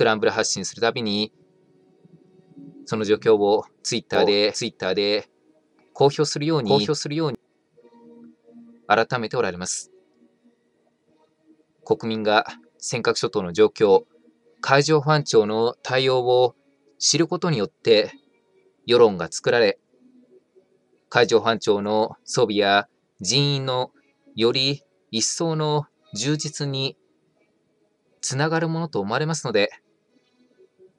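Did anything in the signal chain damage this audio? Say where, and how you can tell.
Yes. From about 4.15 s to 7.35 s there's a doubled audio track: a second full-band copy of the sound runs roughly 700 ms behind the original at more or less the same level. It's a clean repeat with no decay or room colour, so it isn't an echo, and it drops in and out abruptly at those edges. The likely cause sits at the driver or buffer stage, where a slower second capture path gets mixed back in, or else an edit left two offset copies overlapping.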